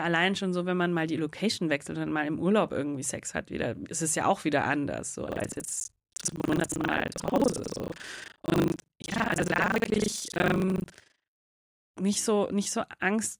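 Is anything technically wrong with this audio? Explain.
Yes, there's buffer tearing from 5.28 to 11.28 s. The app filling the ring buffer and the hardware reading it have drifted out of step, so they cross mid-period every time. Roughly half of each buffer ends up holding audio from a lap earlier, around 70 ms old, spliced in with hard edges on both sides. You hear it as a robotic rattle at about 25 Hz over the speech, which points to a period of roughly 40 ms.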